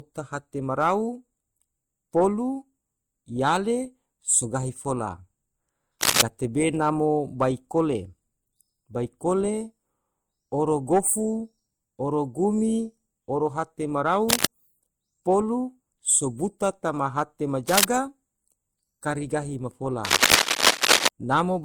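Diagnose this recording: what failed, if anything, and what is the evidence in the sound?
Codec stage: throughout, MP3-style artefacts and cut-off sit under Opus smearing, likely transcoding between lossy codecs (MP3 then Opus). A single encode would show only one artefact character.

Analogue wiring: dense, uneven scratching at 6.01–6.22, 14.29–14.45, 17.68–17.84 and 20.04–21.08 s, slightly louder than the speech, is likely cable scratch noise. Rough bursts, unlike single dropout clicks.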